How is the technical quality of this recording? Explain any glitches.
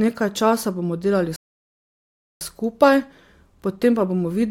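The speech has one clear glitch, a playback stall. Right after "časa bomo delali", at 1.36 s, the sound cuts to silence for about 1.05 s and resumes at 2.41 s. The player likely ran out of buffered data, or its thread was blocked, so output went silent until it recovered.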